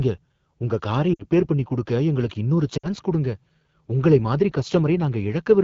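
Throughout, the speech sounds rough and raspy. This is the AMR wideband (HD Voice) codec at one of its lowest rates, which fits about 8.85 kbit/s, where the pulse-driven vocal tract model and the noise-filled upper band no longer hold detail. From 1.13 to 1.25 s, just before "பண்ணி குடுக்க எங்களுக்கு இன்னொரு", the speech briefly warbles and drops to near silence. These are lost AMR speech frames: about 60 ms failed to arrive intact, so the decoder repeated its last pitch and vocal tract settings at falling gain. The same dip returns from 2.77 to 2.89 s, right after "பண்ணி குடுக்க எங்களுக்கு இன்னொரு", again about 60 ms concealed the same way.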